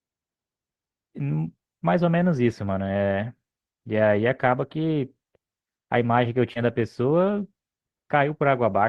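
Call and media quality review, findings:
Short concealed packet loss, 6.53 to 6.57 s. Jitter buffer/decoder: about 20 ms of audio arrived too late, which fits a single lost packet. Concealment extended the preceding speech to cover the gap, then crossfaded back, leaving a brief smear or wobble in the speech.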